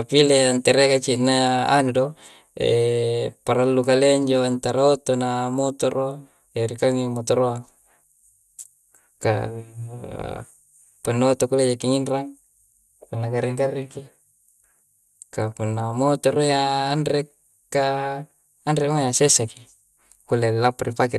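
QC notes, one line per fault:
Throughout, MP2 compression, likely: the speech is noticeably dull, with nothing above 12.2 kHz, and there's a gurgly, grainy edge to it that's plainly audible. That's Layer II running short of bits across its 32 sub-bands, so the top bands get switched off entirely and the ones left are quantised coarsely, flickering in and out as the bit budget shifts. The amount of damage fits a rate around 80 kbps.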